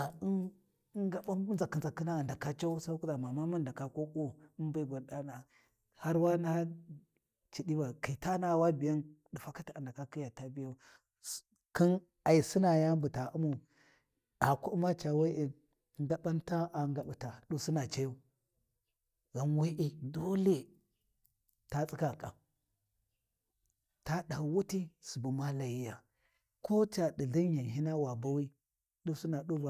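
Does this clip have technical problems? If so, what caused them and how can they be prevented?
No technical faults present.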